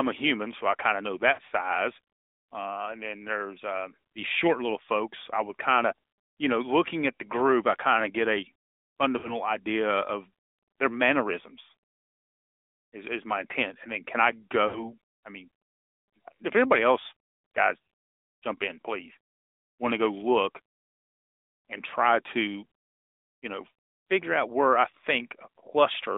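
Throughout, the AMR narrowband mobile codec limits the speech to about 250 Hz to 3.7 kHz, with plainly audible buzzy, synthetic coloration that fits a mode near 10 kbps.

Lost AMR speech frames occur at 1.34, 9.18 and 14.68 s. The decoder extends the last pitch and vocal tract settings, producing brief smeared warbles consistent with two or three missing 20 ms frames.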